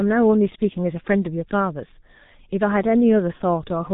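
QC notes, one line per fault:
Throughout: G.723.1 codec. The speech is cut off above 3.8 kHz and rebuilt from a coarse voice model refreshed only every few tens of milliseconds, which fits a rate near 6.3 kbit/s. The heavy damage leaves the sound muffled and hoarse, with smeared consonants.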